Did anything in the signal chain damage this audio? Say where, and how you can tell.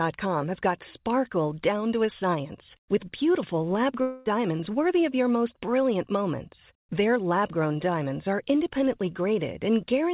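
Yes, at the network stage: a long network dropout from 4.02 to 4.28 s. For about a quarter second the last sound is stretched into a fading buzz with no true silence, likely receiver concealment covering lost packets, unlike a buffer underrun's abrupt, click-edged hole.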